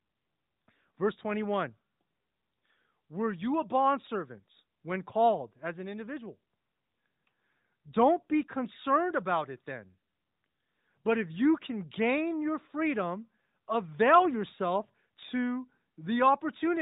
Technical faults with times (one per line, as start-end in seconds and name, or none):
none